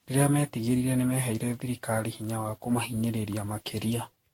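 Right through this speech there's generation loss: a swirly, hollow smear, blurred consonant attacks, and nothing above 16.7 kHz. It likely comes from around ten rounds of lossy re-encoding, each landing on a shifted frame grid, which fits a Vorbis chain near 64 kbit/s.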